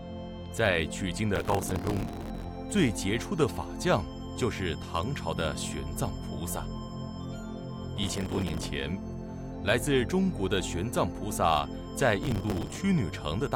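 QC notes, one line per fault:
1.36–2.44 s, 7.97–8.66 s, 12.23–12.77 s: processor overload crackle. Each burst is a gritty tearing laid over the sound, with the longest at about 1.1 s. The processing cannot finish its small buffers on time, and many deadlines are missed in a row. Each missed slot repeats a stale scrap of earlier audio with hard edges. The spacing of the grit fits buffers of around 5 ms, and the crackle stops when the load eases.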